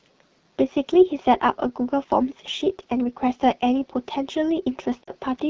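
Speech with a rough, raspy texture throughout and a hissy top end, the plainly audible sound of the AMR wideband (HD Voice) codec running at one of its lowest rates, around 8.85 kbit/s, where its pulse-driven vocal tract model coarsely approximates the voice and noise fills the band above 6.4 kHz. From 5.03 to 5.11 s the sound briefly drops to near silence, about 40 ms of missing audio, which fits two lost AMR speech frames. The decoder bridged them by repeating the last good pitch and vocal tract settings at falling gain before normal decoding resumed.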